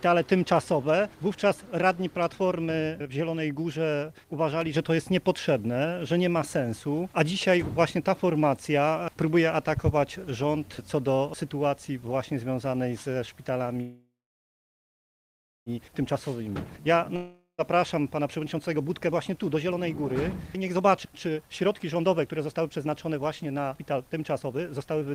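From 13.81 to 15.69 s a call audio freeze occurs: packets were likely held up in transit and the jitter buffer ran dry. The receiver stretches the last sound into a fading buzz, then about 1.57 s of silence. The audio resumes where it stopped, with nothing lost but 1.85 s of added delay.

From 15.88 to 16.16 s a jitter buffer speed-up follows. With the backlog arriving together, the receiver trims a few tens of milliseconds of pitch periods, so the sound runs at 111% speed, hurried but at unchanged pitch.

From 16.30 to 16.52 s a jitter buffer slow-down repeats pitch periods to add 35 ms of reserve. The sound drags at 87% speed with drawn-out sounds.

At 17.16 to 17.61 s a long network dropout, likely packets that never arrived, loses 420 ms of audio. A brief fading buzz gives way to about 0.12 s of silence, and playback rejoins further on, with the missing stretch skipped.

Two further jitter buffer speed-ups shed the accumulated delay. 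From 17.95 to 20.13 s about 0.4 s is cut at 120% speed, and from 20.56 s to the end roughly a second is cut at 126%, so the sound races noticeably while keeping its pitch.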